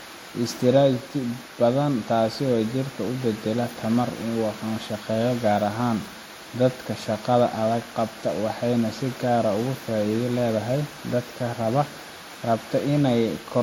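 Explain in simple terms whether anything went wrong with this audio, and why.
The speech sounds smeary and a bit swirly the whole way through, with nothing above 17.9 kHz. That's likely transcoding between lossy codecs: two stacked compressions, each adding its own artefacts.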